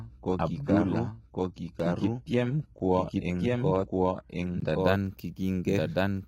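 A second, slower capture path was likely mixed into this speech, giving a doubled audio track: a full-band copy trails the original by roughly one second at about equal level, with no decay. The player started on a low-bitrate version of an adaptive stream, which sounds consistent with HE-AAC around 16 kbit/s. Until 4.80 s the treble is thin and synthetic with nothing above 11.8 kHz, then quality jumps up without a gap. Three blocks of digital silence drop in: a 1.27 ms tick at 1.80 s, a 10.67 ms dip at 2.79 s that fits a 512-sample buffer, and a 16 ms hole at 4.60 s.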